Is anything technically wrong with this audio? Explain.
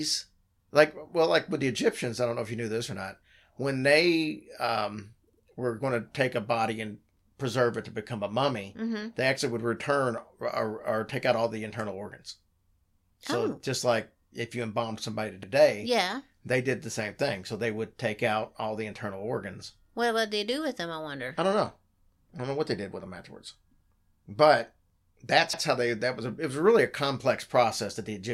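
Yes. Overlapping chunks: at 5.33 s (before "were going to take"), 15.43 s ("if you embalmed somebody" / "yeah they did the") and 25.53 s ("but that's" / "how they"), 10 s chunks each begin 100 ms early, replaying that span as a brief stutter at every join.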